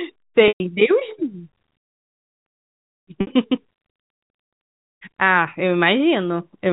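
At 0.48 s and again at 3.21 s, the speech hits packet loss with pitch repetition: the receiver loops the last pitch period to cover roughly 120 ms and 60 ms of missing audio, giving a brief buzzy hold that fades toward silence before the speech cross-fades back in, all over plain G.711 telephone band.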